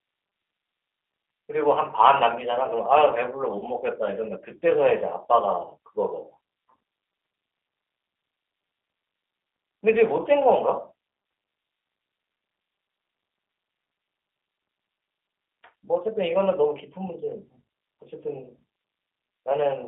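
G.729 codec compression runs throughout. The speech is rebuilt from a vocal-tract filter, pitch predictor and sparse pulses, which fits an 8 kbit/s G.729A stream, and it is confined to roughly 300 Hz to 3.5 kHz. This leaves the speech plainly rough, thin and synthetic-sounding.

At 3.59 to 3.66 s comes VoIP packet loss concealed by the speech codec, pointing to a single lost packet of about 30 ms. The decoder extrapolates its last pitch and filter with falling gain, smearing the sound into a brief fade before recovering.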